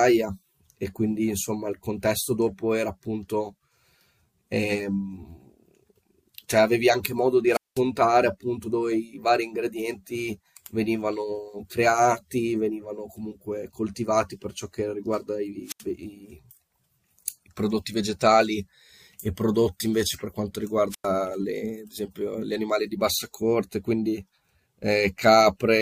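Wireless microphone squelch dropouts occur at 7.50–7.82 s, 15.65–15.84 s and 20.90–21.07 s. Each time, the speech is interrupted as the radio link from an analogue FM microphone weakens and the receiver's squelch shuts the output off. A short surge of hiss leads into a gap of near silence lasting about 200 ms in the first event, 80 ms in the second and 100 ms in the third, before the voice comes back.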